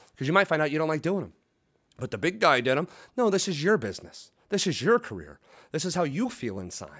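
The speech in this clip has no technical faults. It has passed through a call's microphone processing, which trims the lowest bass and leaves nothing above 8 kHz, as that path normally does.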